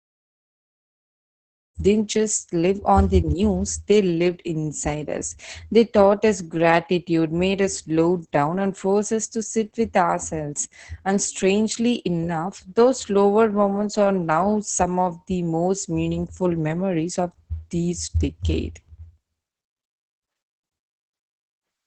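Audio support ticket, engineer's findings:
Opus voice compression, whole clip, through the fade-in ending at 1.78 s: muffled, hoarse, slightly robotic speech. SILK linear-prediction coder with coarse excitation, consistent with about 10 kbps. Spectrogram: hard ceiling at 8 kHz, smeared harmonics, grainy fill between them.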